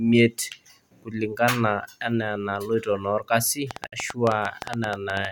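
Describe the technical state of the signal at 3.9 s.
At 3.9 s, uneven ticking of around ten clicks per second runs from 3.71 to 5.26 s, peaking well above the speech; a train of clicks, likely interference or a faulty connection. Within it, the speech drops out for about 55 ms from 3.87 to 3.92 s, a gap at a join of encoded pieces where untrimmed encoder delay and padding remain, recurring every 4.0 s.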